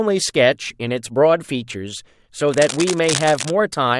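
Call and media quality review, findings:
Cable scratch noise, 2.49–3.51 s: dense, uneven scratching bursts over the speech, roughly 10 dB below it. Likely a worn cable or connector shifting, rapidly varying contact resistance.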